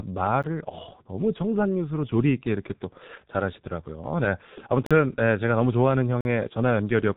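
Throughout the speech, heavy compression by the G.723.1 codec is audible. Its coarse 30 ms frames and slow voice model, at a rate that sounds like roughly 6.3 kbit/s, leave nothing above 3.8 kHz, so the speech sounds muffled and hoarse with smeared consonants.

Three times, likely because the output buffer was not filled in time, a block of digital silence cuts in and out with no fade. At 0.43 s the gap is about 11 ms, consistent with a 512-sample buffer, and is heard as a click. At 4.86–4.91 s and 6.21–6.25 s, longer holes of about 43 ms, consistent with 2048-sample buffers, are heard as short holes in the speech.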